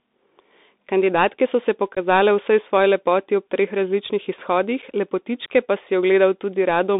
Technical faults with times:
0.00-6.99 Bluetooth CVSD headset codec
1.95-1.98 unconcealed Bluetooth headset packet loss
4.82 unconcealed Bluetooth headset packet loss

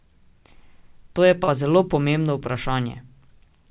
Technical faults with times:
1.44-1.51 short stall from a late packet

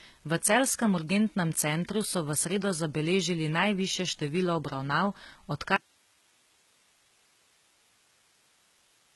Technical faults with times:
0.00-9.15 HE-AAC compression
5.76-9.15 audio dropout to a faint residue

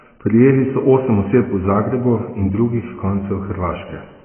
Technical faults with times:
0.00-4.25 AAC compression

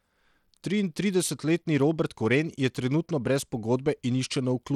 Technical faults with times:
0.00-4.75 Bluetooth SBC compression

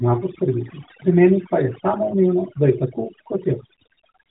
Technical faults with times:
0.00-4.30 overdone noise removal

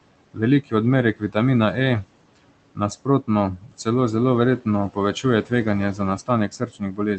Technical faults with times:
0.00-7.19 noise suppressor artifacts
0.34-0.73 speech cut by the noise suppressor
1.15-1.36 speech cut by the noise suppressor
2.75-3.86 speech cut by the noise suppressor
4.60-5.51 speech cut by the noise suppressor
5.94-7.19 speech cut by the noise suppressor

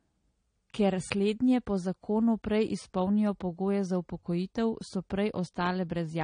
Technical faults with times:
0.00-6.24 transcoding between lossy codecs

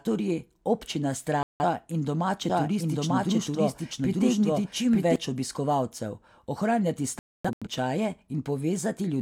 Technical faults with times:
1.43-1.64 digital broadcast dropout
2.50-5.16 doubled audio track
7.19-7.68 digital broadcast dropout

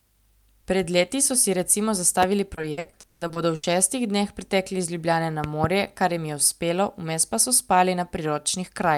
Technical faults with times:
2.23-2.25 loud pop
2.55-3.65 repeated packet loss (robotic sound)
5.44-5.66 loud pop

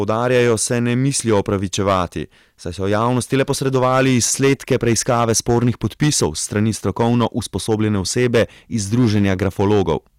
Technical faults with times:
0.00-10.19 hard clipping

